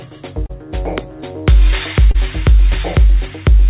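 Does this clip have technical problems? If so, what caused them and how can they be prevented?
Yes. There is short concealed packet loss at 0.46 to 0.51 s and again at 2.11 to 2.16 s. About 40 ms of audio never arrived in time. The receiver extended the preceding sound for about 30 ms, then blended back in, leaving a brief smear. A deeper jitter buffer, or forward error correction on the network link, would prevent it. The audio stops at 4 kHz, which fits a G.711 mu-law call path.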